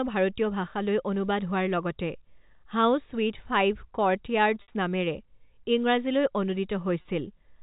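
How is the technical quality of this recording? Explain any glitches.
The recording has two glitches, both packet loss with pitch repetition, on a G.711 telephone path that passes nothing above 4 kHz. At 4.62 to 4.68 s, 60 ms of audio was lost, which fits two dropped packets. At 7.02 to 7.05 s, another 30 ms went missing, consistent with one packet. In each case the receiver bridged the gap by repeating the last pitch period of the voice. In the shorter gap the speech briefly holds on a buzzy tone before it picks up again, while in the longer gap the repeated tone fades into silence before the speech returns with a short cross-fade.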